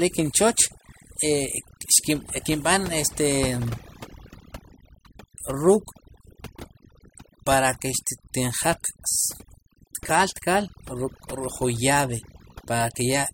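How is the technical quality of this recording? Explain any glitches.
The recording suffers from overdone noise removal across its full length. A noise reduction stage set far too aggressively cuts individual frequency bands down or out whenever they sit close to its noise estimate, taking quieter parts of the speech with them. The background drops and breaks up into twinkling specks.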